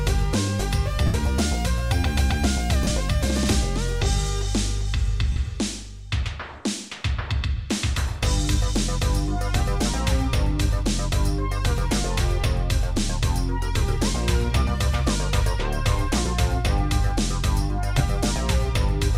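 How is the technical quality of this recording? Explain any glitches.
The recording has brief gaps from lost LE Audio frames at 1.06–1.14 s, 2.83–2.91 s (scattered), 5.32–5.36 s, 16.25 s and 17.98–18.00 s. Each gap is filled by the LC3 decoder repeating the last spectrum with random phase. The result is a noisy smear rather than the hard silence or click of a plain dropout.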